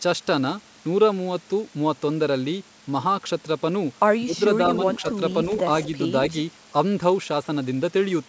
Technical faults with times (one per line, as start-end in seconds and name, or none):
4.21-4.34 speech suppressed in double talk
4.76-5.13 echo leak
5.02-5.20 speech suppressed in double talk
5.84-5.88 echo leak